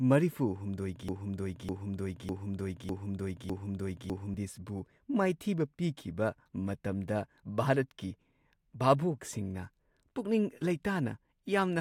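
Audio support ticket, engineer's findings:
Likely player or stream stall, last buffered fragment resent instead of new audio. Broken-record loop from 1.09 to 4.34 s: a 0.6 s piece of speech repeats five times back to back; the speech due in that span is lost.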